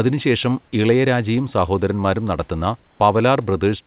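Just after "ഇളയരാജയും സഹോദരന്മാരും നടത്തുന്ന", from 2.84 to 3.0 s, the room noise, sitting about 40 dB below the loud parts, turns into a flat, featureless noise about 5 dB quieter for 160 ms, then the real background returns. This is likely comfort noise in place of the background: during the pause the sender stopped transmitting, and the receiver filled the gap with synthetic noise roughly matched to the room sound.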